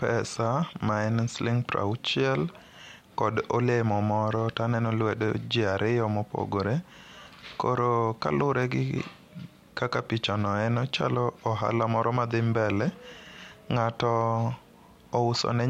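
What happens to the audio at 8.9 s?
CD scratch ticks run from 8.45 to 9.68 s, just before "kaka pichano en ochalo". Eight brief clicks, the longest about 2 ms, come once per disc revolution, where the player conceals data too damaged to correct.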